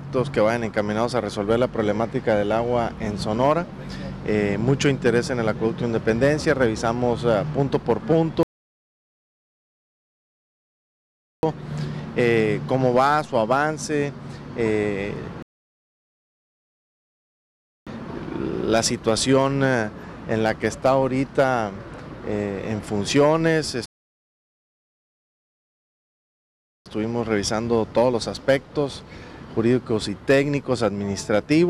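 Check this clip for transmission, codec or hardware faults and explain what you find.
Three rebuffering stalls, at 8.43–11.43 s, 15.43–17.87 s and 23.86–26.86 s: playback starved of downloaded data, fell silent for 3.0, 2.44 and 3.0 s, then resumed exactly where it paused, with nothing skipped.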